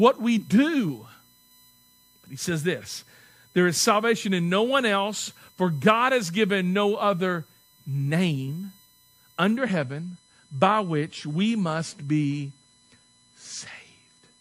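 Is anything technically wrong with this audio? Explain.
Yes, two faults. Throughout the speech runs a USB whine: bus current in 1 ms frames leaks into the audio as a steady tone at 1 kHz and its harmonics, strongest at 4 kHz, roughly 35 dB below the speech. A spectrogram shows thin horizontal lines at these multiples.

From 9.57 s to the end, the adaptive stream switched to a lower bitrate, which fits a drop from 128 to 48 kbit/s MP3. Treble above 11.3 kHz vanishes abruptly with no gap, and the spectrogram shows a sharp ceiling.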